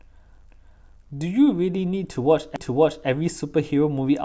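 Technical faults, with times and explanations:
0.51–1.02 s and 2.56–3.07 s, repeated buffer: fresh audio arrived late, so the device replayed its last half-second block once, giving an audible speech stutter with hard joins, which fits an 8192-sample buffer.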